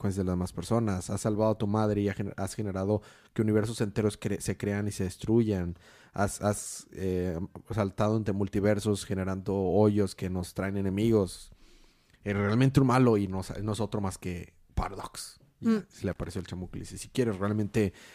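Speech, with a burst of loose connector crackle from 16.11 to 16.41 s: a worn contact making and breaking chops the signal into irregular scratching. On a waveform it shows as jagged dropouts and spikes; on a spectrogram, scattered broadband vertical streaks.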